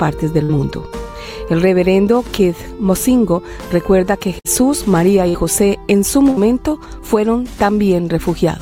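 At 0.43, 4.39, 5.29 and 6.30 s you get a burst of packet loss, roughly 60 ms of audio dropping out each time. The receiver stretches the last bit of sound into a short fading buzz or hiss, then jumps ahead with that stretch missing.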